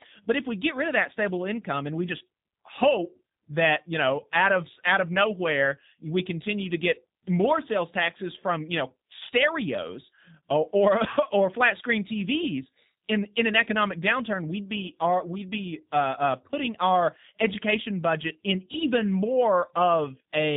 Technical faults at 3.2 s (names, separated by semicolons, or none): G.729 codec